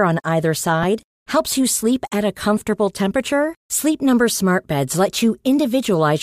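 At 0.83 s, just after "on either", a brief grainy smear replaces the sound: lost LE Audio frames, about 7.5 ms, fitting one dropped frame the LC3 decoder concealed with noise-like spectrum.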